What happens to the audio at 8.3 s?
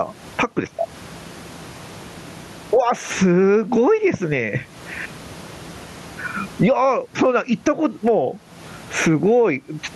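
At 8.3 s the speech sounds squashed, with loud and soft syllables pulled close together in level. That gain pumping runs through the whole clip, not just this moment, and the swing is around 20 dB. The likely cause is microphone gain set far too high, with a fast limiter or compressor clamping down on every peak and releasing in the pauses; the room noise sits normally about 40 dB under the speech.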